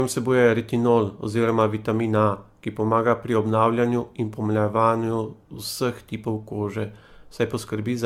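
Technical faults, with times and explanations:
Throughout, generation loss: speech sounds swirly and hollow, attacks blurred, nothing above 17 kHz, likely from about seven AAC re-encodes compounding quantisation noise.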